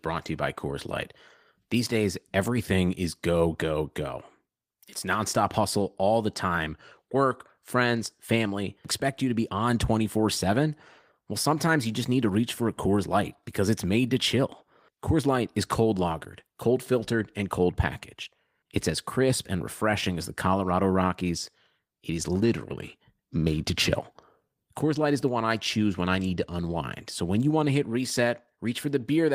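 A speech recording with periodic clock jitter from 22.40 to 24.15 s: the converter clock wobbles at around 1.5 kHz, throwing sidebands off the voice and giving it a rough, metallic edge.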